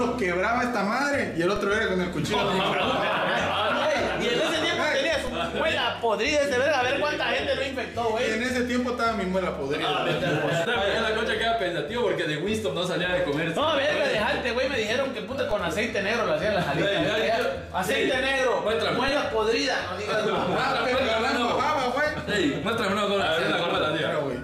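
At 1.56, 5.27, 15.51 and 19.08 s a DC step shifts the waveform's zero line abruptly, by about -21 dBFS for the first two and about -20 dBFS for the last two. Each offset then drains away through a 20 Hz high-pass, so it is heard as a brief low thump while the sound carries on unchanged. On the waveform the trace lifts off centre and curves back; a spectrogram shows a short low-frequency smear at each step.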